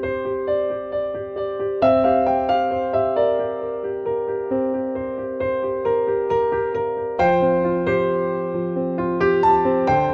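Nothing here calls for comment, as there's no technical fault to hear anywhere in the clip.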